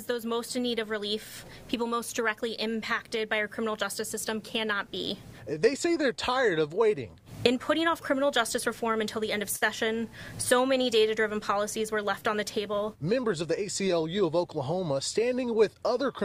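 At 9.56 s a packet arrived late and the jitter buffer ran dry, producing a short stall from a late packet that lasts until about 9.64 s. Rather than leave silence, the receiver stretched the last sound for 57 ms while it waited, then resumed exactly where it had paused, so nothing is lost. The gap instead becomes a briefly held sustain with a slight buzz or dip, and everything after it plays 57 ms later than before.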